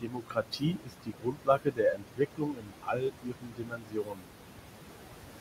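Noise suppressor artifacts run through the whole clip. The suppressor pulls the background down by about 21 dB wherever it judges the noise steady, frame by frame, so the noise sinks between phrases and rises again under the speech. The room noise sits only about 9 dB below the speech, and that small margin is what the suppressor is working against. From 0.01 s to 4.33 s, the noise suppressor also cuts speech. It misreads parts of the speech as noise and attenuates them along with the background, by up to about 22 dB. Across roughly four seconds of that span, the affected parts of the speech come out swallowed and faint.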